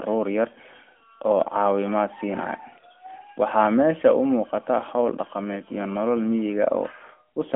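Nothing in this speech recording stands out as a technical fault. It has passed through the AMR narrowband mobile codec at 12.2 kbps, so the sound is confined to a telephone band of roughly 250 Hz to 3.4 kHz with only light coding coloration.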